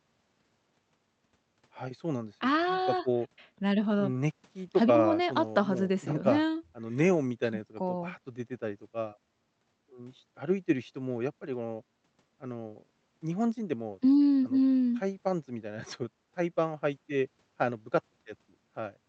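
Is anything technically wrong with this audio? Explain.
No, nothing is technically wrong with this audio.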